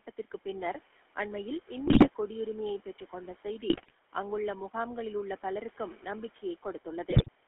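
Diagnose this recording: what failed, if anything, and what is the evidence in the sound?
The speech has a buzzy, gravelly roughness from start to end. It also sounds band-limited, cut off below about 300 Hz and above about 3.4 kHz. This is the GSM full-rate codec, at the codec stage. It fits 13 kbps coding. The codec models the vocal tract and drives it with sparse regular pulses. Most excitation detail is discarded.

Three short bursts of squawking and gargling break through at 1.86 to 2.10 s, 3.70 to 3.91 s and 7.10 to 7.29 s. These are GSM bit errors on the network link. Flipped bits corrupt the decoder's filter, pitch and gain values. Each damaged frame then has a warped spectrum or a sudden jump in level.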